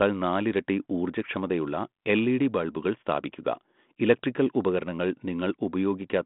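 Nothing goes wrong anywhere in this bit of speech; it's carried the way a 32 kbit/s G.726 line carries it, in a phone band of roughly 150 Hz to 3.5 kHz with nothing above about 3.8 kHz.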